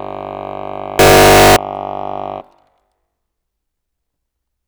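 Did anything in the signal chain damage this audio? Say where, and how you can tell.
Yes. From 0.99 to 1.56 s the music turns into a harsh, near-square wave at an almost fixed, high level, with quiet background as loud as the music. This is likely a float read as integer at the sample-format conversion stage: 32-bit float samples interpreted as 32-bit integers. Unlike ordinary clipping, the level no longer follows the original loudness, yet the pitch stays traceable.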